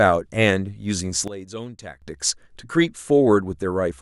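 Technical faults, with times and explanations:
1.28 to 2.02 s, sudden gain jump: The speech drops by about 15 dB in an instant, then returns at 2.02 s. The background noise falls and rises with it. The likely cause is a digital gain change applied between two samples with no ramp.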